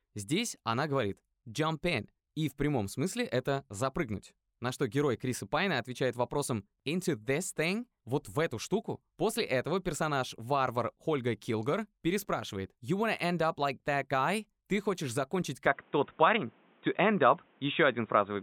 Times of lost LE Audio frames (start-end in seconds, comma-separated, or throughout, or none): none